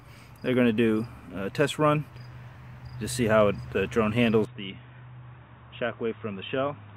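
At 4.45 s the sound abruptly narrows to nothing above 3.8 kHz, drops roughly 10 dB and gains a faint new noise floor, likely an input switched to a poorer device.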